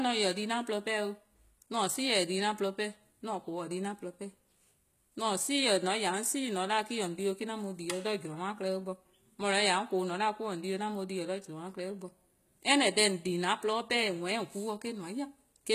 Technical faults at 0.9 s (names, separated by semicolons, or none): HE-AAC compression